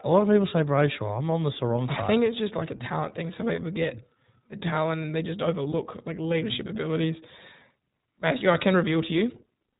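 The speech has been carried through the iLBC codec from start to finish, a narrowband VoIP coder that codes each frame's excitation on its own. Its plainly audible damage points to the 15.2 kbps mode with 20 ms frames. Everything above 4 kHz is gone, so the speech sounds muffled and telephone-like, with a slightly rough, synthetic texture laid over it.

Between 3.56 and 3.59 s, and again between 5.72 and 5.75 s, lost iLBC frames interrupt the speech. Each gap fits a single missing 20 ms frame. The decoder fills it by repeating the last pitch cycle blended with noise, and you hear a brief held, faintly buzzy vowel sound. Since each iLBC frame decodes independently, the speech comes back clean right after each dropout.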